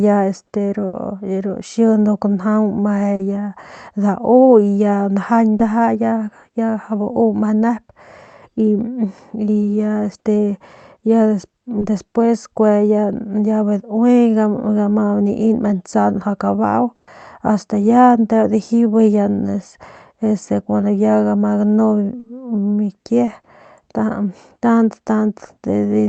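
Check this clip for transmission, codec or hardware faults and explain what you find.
Seven packet-loss events occur across two kinds of fault, heard over an Opus call path whose spectrum stops at 8 kHz.

Burst of packet loss at 0.87–0.95 s and 16.95–17.09 s, just before "ast ya nteu". The receiver extended the last sound and faded it, while about 60 ms and 120 ms of audio are missing. Each burst is heard as a held buzz or a fading hiss. On a spectrogram it shows as a smeared, fading patch.

Short concealed packet loss at 3.15–3.21 s, 5.57–5.61 s, 11.79–11.83 s, 22.19–22.25 s and 23.25–23.29 s. Gaps of 20 to 40 ms were filled by continuing the preceding sound. Each is heard as a brief smear or wobble and appears as a smoothed patch on the spectrogram.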